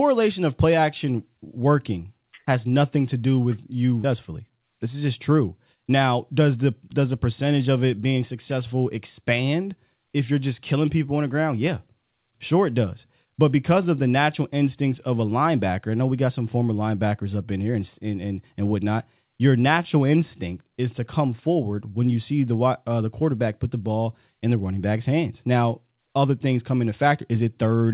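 At 4.04 s, just after "to do with you", a stretch of speech was dropped, roughly 0.7 s of it, while later audio was already waiting. That is a skip ahead. Nothing fills the hole, so playback leaps straight from one side of the cut to the other with no pause. The delay drops by about the same amount, and the sentence lurches onward with a chunk abruptly missing.

From 4.14 s to 5.02 s, ending just before "just true", the buffer was still holding more audio than it aimed for. To trim that excess it cut out short pitch-period slices again and again, around a tenth of a second in total. This jitter buffer speed-up makes the speech run at about 110% speed with the pitch unchanged, so the phrase sounds briefly hurried and clipped in rhythm. All of this passes through a narrowband call codec, with nothing above 4 kHz, which fits G.711 A-law at 64 kbps.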